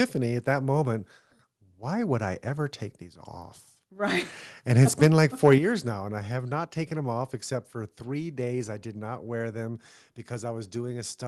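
From 5.44 to 5.55 s, the input was likely driven about 2 dB past the converter's limit, a microphone overload; flattened peaks give a brief, harsh crackle. At 5.58 s, just before "now and I have", the microphone volume was likely stepped down by about 7 dB, so speech and background drop abruptly.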